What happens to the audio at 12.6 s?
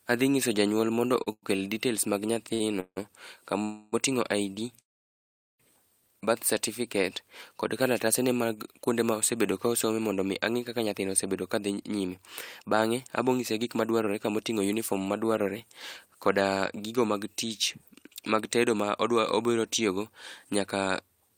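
At 12.6 s you're in the middle of a jitter buffer speed-up running from 10.79 to 14.28 s, right after "osome mondo angí kaka". The receiver kept snipping out pitch-period-sized slices to drain excess buffered audio, roughly a third of a second in total, so the speech plays about 8% fast at unchanged pitch and sounds a bit rushed.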